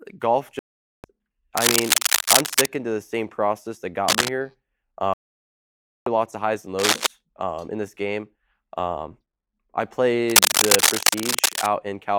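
The speech mutes outright at 0.59–1.05 s and again at 5.14–6.07 s. This is a digital broadcast dropout: the receiver lost frames and silenced 448 ms, then 928 ms, of programme. Rough, dense scratching rides over the speech at 1.57–2.67 s, 4.08–4.31 s, 6.79–7.07 s and 10.29–11.67 s, as loud as the speech or louder. This is likely cable scratch noise from a disturbed contact.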